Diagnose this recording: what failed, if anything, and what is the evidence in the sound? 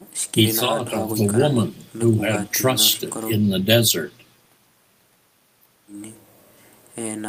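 Nothing failed here: no stage between capture and playback leaves any audible trace in this speech recording, so there is no evidence to report.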